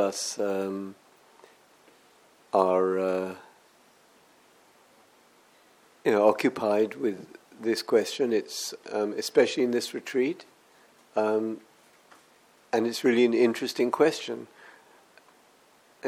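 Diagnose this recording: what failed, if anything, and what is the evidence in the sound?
Nothing in the signal chain has failed: levels, continuity and timing hold steady throughout, with no audible damage at any stage from capture to playback.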